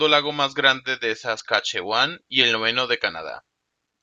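Short speech clip with one glitch: right after "lago más grande de" there's damaged data in the compressed stream, a brief disruption from 1.37 to 1.40 s as the decoder loses sync and hunts for the next valid frame.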